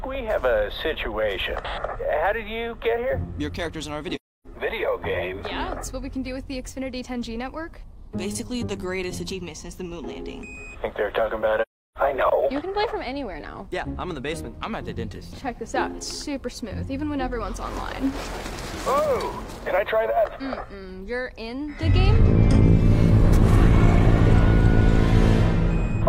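The audio drops out twice, at 4.15 to 4.47 s and again at 11.61 to 11.98 s, and both gaps are AAC frame loss with muting. The decoder zeroed out the missing spectrum, so you get a soft-edged hole, roughly 0.30 s and then 0.34 s long, fitting about seven and eight lost frames. The overlapping windows fade the sound out and back in over about a frame.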